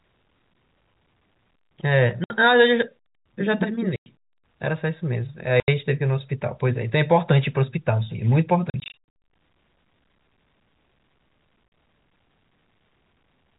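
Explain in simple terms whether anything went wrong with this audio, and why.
Yes, something went wrong. The speech has packet loss filled with silence: pieces of the signal never arrived, and the player put dead silence in their place. You hear sudden holes at 2.24 s, 3.96 s, 5.6 s and 11.68 s, lasting from 40 to 100 ms, and a choppy stretch from 8.7 to 9.08 s made of many short gaps. The gap lengths fit 20 ms packets.

Unlike smoothed-over losses, these gaps go completely silent with hard edges. The narrow, telephone-like sound comes from the telephone coding, which is working as expected.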